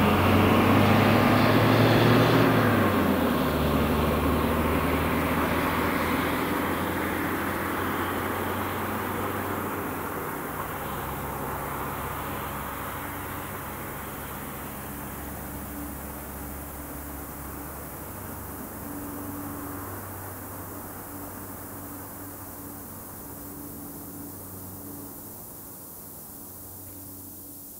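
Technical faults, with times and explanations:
Throughout, low bit depth with noise shaping: a 7-bit signal leaves rounding noise only about 10 dB down, pushed upward into a steady, thin hiss rather than grainy signal-following distortion.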